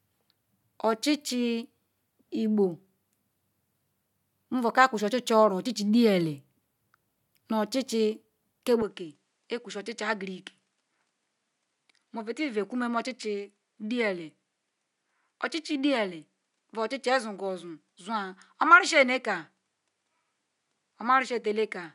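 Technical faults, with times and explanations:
8.82 s to 21.95 s, input switched to a poorer device: with no gap, the sound turns duller and drops about 5 dB in level, and a faint new noise floor, roughly 55 dB down, appears. The likely cause is a change to a different microphone with a narrower band. On a spectrogram, energy above 10.6 kHz vanishes from 8.82 s onward. The waveform envelope steps down at that point and stays lower to the end.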